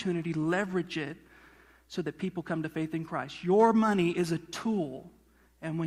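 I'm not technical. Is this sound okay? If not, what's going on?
Yes, this sound is okay, and nothing is going wrong in it.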